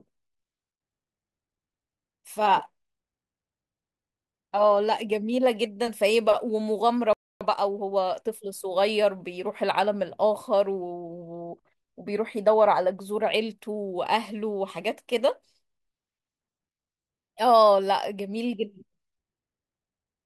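At 7.13 s the speech cuts out mid-flow. Silence follows for about 277 ms, until 7.41 s. This is a playback stall. The player most likely ran short of data, or its output thread was briefly held up. Nothing reached the output during the gap. The break is clear and abrupt, not a pause in the talking.

From 7.41 s to 8.51 s the player is making up lost ground. This is time-compressed catch-up. To drain its backlog, it trims small slices from the audio and cross-fades the joins. The effective rate here is 1.25 times normal. Pitch stays where it was. The speech sounds rushed for just over a second. Normal pace resumes at 8.51 s.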